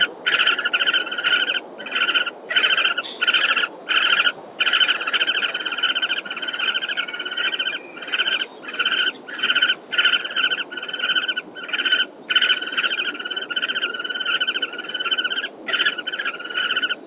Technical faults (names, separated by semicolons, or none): noise suppressor applied to music or sounds; sound cut by the noise suppressor